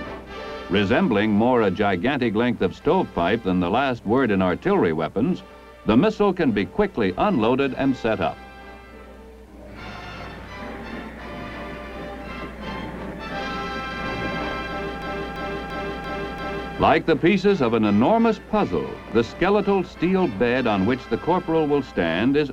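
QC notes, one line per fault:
15.02–16.73 s, system hang loop: the same 0.34 s stretch of audio plays five times back to back, a repeat rate of about 2.9 per second, heard as a rhythmic skipping. The sound hardware kept cycling through one ring buffer while the system froze; the loop length fits a 16384-sample buffer. Essentially nothing is lost afterwards. The waveform shows five identical copies, and the spectrogram shows matching blocks with a vertical seam every 0.34 s.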